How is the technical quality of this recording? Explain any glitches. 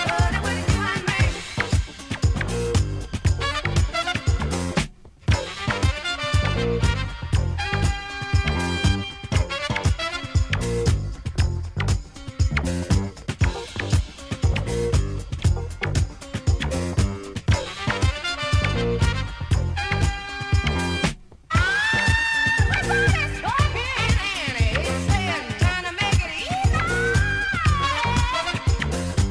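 No glitches or technical faults can be heard anywhere.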